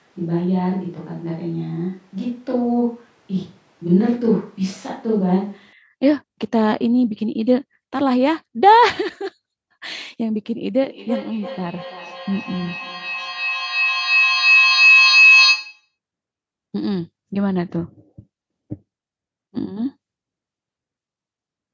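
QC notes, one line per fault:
0.0–5.73 s, switch to a distant microphone: The close microphone's signal was likely missing, so a microphone further away picked up the sound. The speech is already roomy, hollow and thin in the bass at the start, with no real level drop but background room noise only about 35 dB below it.
10.82–15.95 s, feedback howl: Two devices in the same room joined the call, and sound looped from loudspeaker to microphone with gain on each pass. Instead of dying away, the repeats, coming roughly every third of a second, build into a tone near 3 kHz that peaks about 6 dB above the speech.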